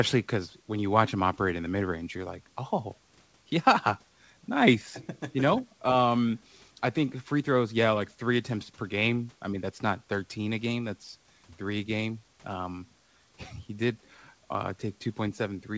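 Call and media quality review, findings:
No faults found on this speech call.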